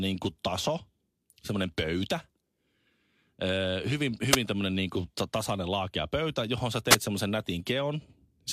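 At 4.30 to 4.37 s and again at 6.89 to 6.97 s, the speech is hit by a wireless microphone noise hit, each lasting under a tenth of a second. The FM radio link fades as reflected signals cancel the direct one, so receiver noise surges up as a quick swish of static. On a spectrogram each shows as a narrow vertical smear of broadband noise; the waveform gains a short, fuzzy, noise-like burst.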